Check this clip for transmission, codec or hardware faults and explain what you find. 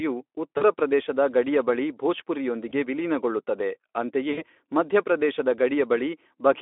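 The clip has one transmission fault: VoIP packet loss concealed by the speech codec, heard three times, at 0.57 to 0.64 s, 2.69 to 2.73 s and 4.32 to 4.45 s. About 40, 20 and 60 ms of audio went missing. The decoder stretched its last pitch and filter with falling gain, so each gap sounds like a brief buzzy or noisy smear that fades. The speech stays weak for a moment afterward. Through all three, the narrowband Speex coding is present, with only light codec damage.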